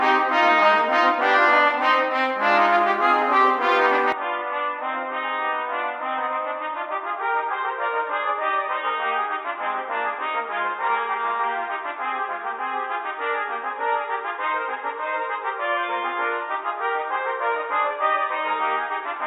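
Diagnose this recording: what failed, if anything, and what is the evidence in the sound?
From 4.12 s to the end the sound turns abruptly dull and boxy, with nothing above 3.8 kHz, a drop of about 5 dB and a faint new noise floor, with no gap at the change. The likely cause is an input switched to a poorer device at the driver level.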